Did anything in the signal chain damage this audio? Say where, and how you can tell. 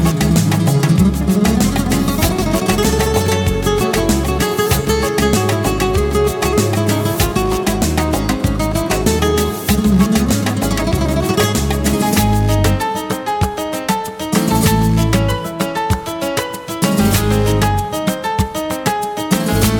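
No, nothing in the signal chain audibly damaged this audio. Listening through each stage from wiring to playback turns up no point where the sound breaks, shifts or degrades.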